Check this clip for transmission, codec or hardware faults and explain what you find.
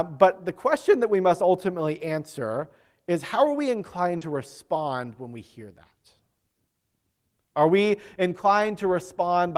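The speech clip has packet-loss faults of two kinds.

Lost packet rebuilt from error correction occurs at 1.21 to 1.27 s, between "the question that we" and "ultimately answer is how"; at 4.21 to 4.23 s; and at 8.59 to 8.69 s. Each time, the next packet's low-bitrate copy replaced the lost audio, so there is no gap. Those 40, 20 and 60 ms stretches sound rougher and noisier.

Short concealed packet loss occurs at 4.17 to 4.23 s, after "is how are we" and before "to respond when we". Forty milliseconds never arrived, and the decoder extended the previous sound to fill the hole. It is heard as a brief smear or wobble.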